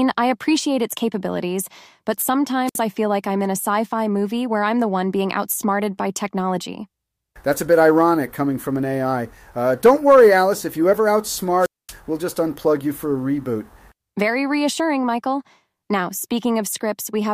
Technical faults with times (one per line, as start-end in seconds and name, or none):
2.66-2.77 wireless microphone squelch dropout
11.59-11.94 wireless microphone squelch dropout